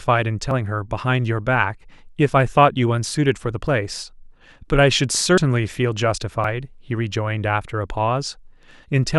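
At 0.51, 3.67, 5.38 and 6.44 s the speech skips ahead by roughly 40 ms, with no silence where the two edges join. A dropped buffer (overrun) is the likely cause. Each shows as a waveform discontinuity and a thin broadband vertical line on the spectrogram.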